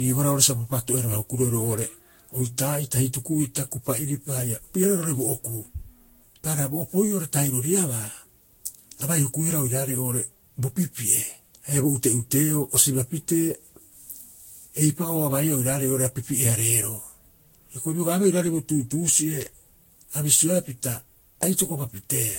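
Speech with generation loss throughout: the sound is swirly, smeared and hollow, worse than one lossy pass at this quality would leave it, and consonant attacks are blurred. Nothing remains above 16.6 kHz. The likely cause is repeated decoding and re-encoding, about seven passes, each requantising on a shifted frame grid so the noise and spectral holes build up. The character fits a Vorbis chain at around 60 kbit/s.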